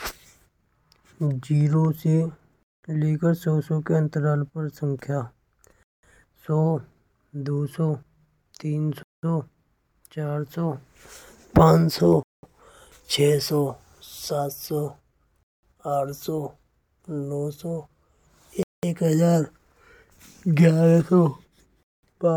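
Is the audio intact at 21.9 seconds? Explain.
No. At 21.9 seconds the speech falls inside a gap between chunks running from 21.83 to 22.03 s: a 200 ms silence where one 3-second chunk ends and the next begins. Unlike a dropout, nothing is missing; the speech resumes exactly where it stopped.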